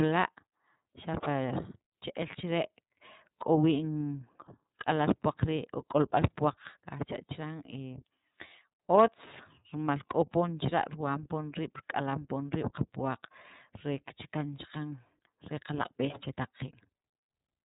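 From start to finish the speech sounds muffled, with nothing above 3.8 kHz, and carries a plainly audible rough, slightly synthetic edge. This is iLBC codec damage: each frame's excitation is coded independently, consistent with 30 ms frames at about 13.33 kbps.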